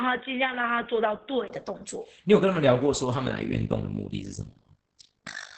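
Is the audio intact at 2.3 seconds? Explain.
No, Opus voice compression runs throughout, including 2.3 s. Its SILK predictive coder caps the band near 8 kHz and codes excitation coarsely, leaving speech muffled, hoarse and slightly robotic, consistent with roughly 10 kbps.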